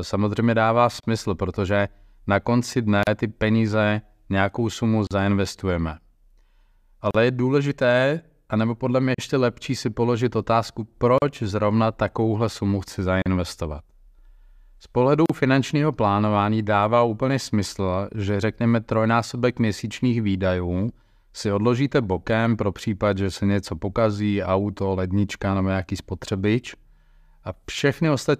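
At 1.0, 3.03, 5.07, 7.11, 9.15, 11.18, 13.22 and 15.26 s, every 2 s, the speech drops out for 31 ms, then 38 ms thereafter. These are gaps at a join of encoded pieces: each separately encoded segment kept its encoder delay and end padding. The result is abrupt silences with smeared edges, after which the speech resumes where it stopped.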